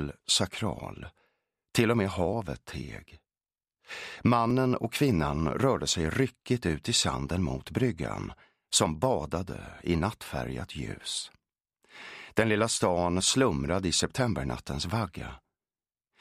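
From 0.17 s to 15.38 s, a click recurs about every 2.17 s, roughly seven times. These are clock drift buffer slips, likely from two clocks about 500 ppm apart dropping or repeating a few dozen samples. Unlike random dropouts, the clicks are evenly spaced.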